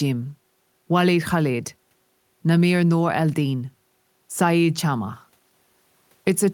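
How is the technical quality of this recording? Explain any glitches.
Nothing to flag here: the speech comes across without a single audible glitch, so there's nothing to explain.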